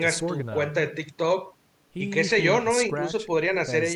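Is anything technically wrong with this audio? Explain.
No, nothing is technically wrong with this audio.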